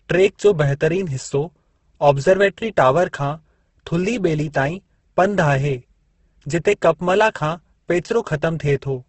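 From start to finish the speech sounds rough and grainy, with voiced sounds turning noisy rather than swirling, and nothing is present above 8.2 kHz. This is likely Opus compression in its music (CELT) mode, with heavy damage that fits a low bitrate around 12 kbps: the encoder keeps each band's energy but refills starved bands with folded or noise content. A spectrogram shows a hard ceiling at 8.2 kHz and smeared, noise-textured bands with few empty holes.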